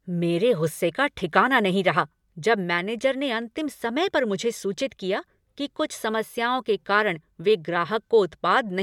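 No technical faults are audible.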